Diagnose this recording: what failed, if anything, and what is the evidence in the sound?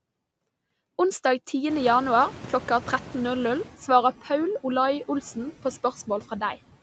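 The call's noise suppression stage fails in two ways, both in the call processing rather than the codec.

Noise suppressor artifacts run through the whole speech clip. The residual background is pulled down by about 15 dB between phrases and swells back under the speech. That level pumping, locked to the speech, is what separates it from codec coding noise. The band limit, with nothing above 8 kHz, stays constant, as expected from an Opus call path at a bitrate that sounds like roughly 40 kbps.

The noise suppressor is also catching up after a sudden change. The room noise jumps by about 23 dB at roughly 1.5 s. From 1.69 s to 3.74 s it comes through with only about 9 dB of reduction, then sinks over those 2.05 s as the noise estimate adapts. An automatic gain change would shift the speech level too. Here the speech holds steady while only the background slowly recedes, which points to a lagging noise estimate.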